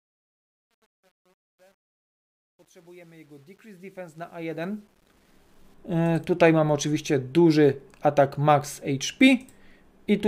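From 0.0 to 5.74 s the fade-in carries truncation distortion on a fade. The gain stage drops low bits without dither, with grain that suggests a word length of about 10 bits. The quietest stretch, 0.0 to 4.4 s, is worst: the faint start sounds gritty before the fade clears. On a waveform, the low-level section looks like blocky square steps. A spectrogram shows broadband harmonic hash over those first seconds.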